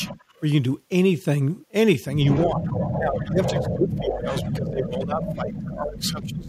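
Speech with two call-path faults. An echo leak appears at 0.0–0.4 s, faintly at about 20 dB below the voice, and again from 2.24 to 4.87 s, louder at about 10 dB below. It is a delayed copy trailing the speech by 145 ms, likely from an echo canceller leaving loudspeaker pickup behind. On a spectrogram this shows as ghost harmonics shifted 145 ms to the right. Speech suppressed in double talk cuts the level by about 25 dB at 0.06–0.18 s and about 15 dB at 2.45–2.67 s, then by up to about 25 dB from 2.98 s to the end. This is likely the canceller ducking the near talker while both sides speak. The waveform envelope dips.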